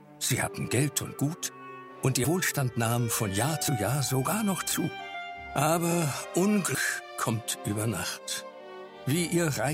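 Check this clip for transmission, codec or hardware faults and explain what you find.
The clip has three small forward jumps, caused by compressed frames being skipped.

At 2.23 s, 3.67 s and 6.74 s the sound lurches ahead with a short smeared blip rather than a sharp click. Roughly 70 ms, 50 ms and 150 ms of material go missing, the last jump being clearly the largest. Whole frames were dropped by the decoder, either absent or rejected as damaged. The skip lengths fit frames of about 23 ms, and the overlap between neighbouring frames softens each join.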